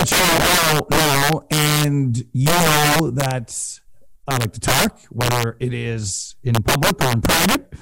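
From start to finish the speech carries integer overflow: pushed about 12 dB too hot, the loudest peaks, roughly one sample in fourteen, wrap to the opposite sign instead of holding at the limit. Each wrap cracks violently, shows as large vertical jumps in the waveform, and spreads broadband streaks across the spectrogram.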